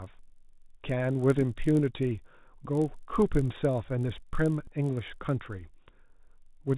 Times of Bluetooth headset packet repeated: 4.64-4.69

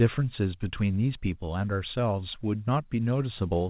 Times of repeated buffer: none

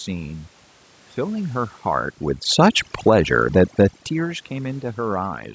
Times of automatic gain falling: 1.22-3.24

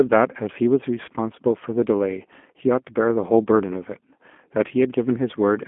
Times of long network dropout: none

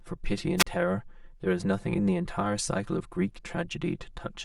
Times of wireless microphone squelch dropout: 0.57-0.67

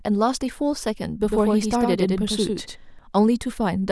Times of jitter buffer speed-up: none

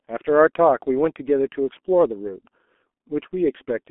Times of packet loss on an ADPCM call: none

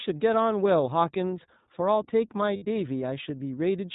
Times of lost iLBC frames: 2.56-2.63

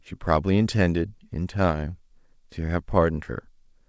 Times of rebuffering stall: none

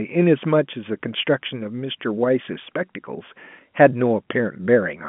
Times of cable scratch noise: none

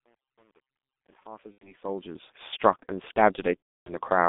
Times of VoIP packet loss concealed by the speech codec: 1.52-1.73, 3.58-3.97

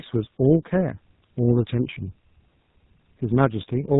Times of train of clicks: none

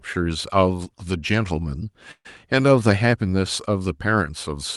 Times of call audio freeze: 2.11-2.27

